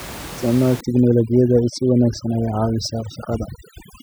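From 0.81 s to the end at 4.02 s, the speech carries overdone noise removal. The room noise, about 15 dB below the voice, gets treated too aggressively. Bands near the noise floor are pulled almost to nothing. Quiet parts of the voice vanish with them. The background drops and breaks up into twinkling specks.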